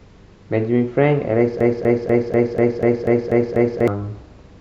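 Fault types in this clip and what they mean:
Broken-record loop: from 1.61 s to 3.88 s the speech stops moving forward and one 0.24 s fragment plays nine times back to back, so whatever should have followed in that stretch is gone. A stalled player or stream that kept resending its last buffered piece is the likely cause. On a waveform the same envelope shape repeats at exact 0.24 s intervals, and a spectrogram shows an identical block of patterns stamped side by side.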